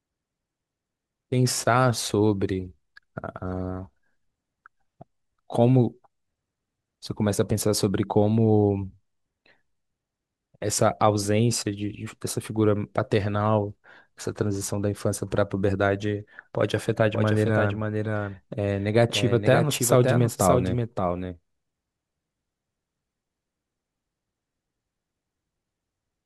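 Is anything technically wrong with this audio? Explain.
Yes. From 17.14 s to the end, the speech has a doubled audio track. A second, full-band copy trails the original by about half a second. It sits roughly 5 dB below it. The copy starts abruptly, with no decay or room colour, so it sounds like a flat, detached repeat rather than an echo. Each phrase is shadowed by itself. The likely cause is the same audio being captured again through a slower path and mixed back in.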